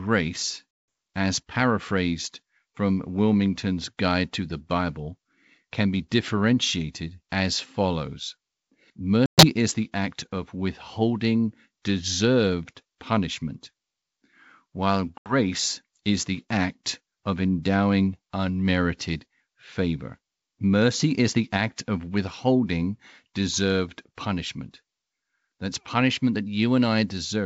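Packet loss on an ADPCM call cuts hard silent holes at 0.71–0.88 s before "as paraphrased from", 9.26–9.46 s before "is the act of", and 15.18–15.34 s. Each time, the resynchronising decoder resumes slightly distorted before settling.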